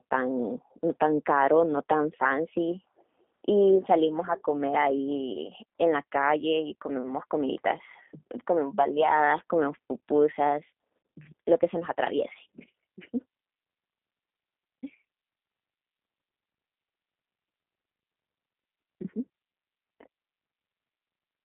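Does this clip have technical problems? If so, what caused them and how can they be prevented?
Yes. Throughout, the speech carries G.729 codec damage: plainly audible, rough and synthetic. The codec rebuilds each short frame from a vocal-tract filter, a pitch predictor and a few pulses rather than the waveform itself, and the sound fits the 8 kbit/s G.729A variant on a telephone line band of 200 Hz to 3.5 kHz. On a spectrogram, energy stops at a hard ceiling near 3.7 kHz and thins below 200 Hz, with smeared, blocky harmonics. Using a wideband codec such as Opus or G.722 for the call or recording would prevent it.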